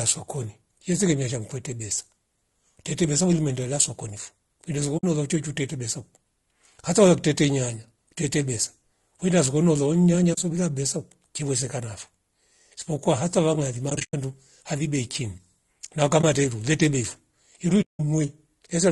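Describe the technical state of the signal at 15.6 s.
At 15.6 s the speech carries the same damage as the rest of the clip: the likely cause is low-delay AAC compression, the AAC-ELD codec used for video calls, at a rate that fits roughly 32 kbps. Its short frames can't separate the voice's pitch harmonics cleanly and leave too few bits to fill them, so the voice sounds plainly rough and grainy, with noise seeping between harmonics and a thin, synthetic-sounding top band.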